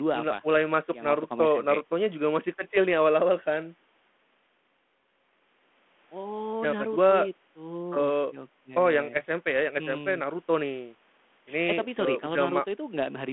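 Nothing stood out on listening to this clip.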